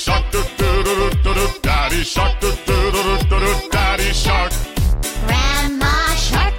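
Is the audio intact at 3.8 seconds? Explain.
No, DAB burbling occurs from 3.78 to 3.81 s. Bit errors reaching the MP2 data corrupt sub-band levels across a few frames, producing brief blips of noise.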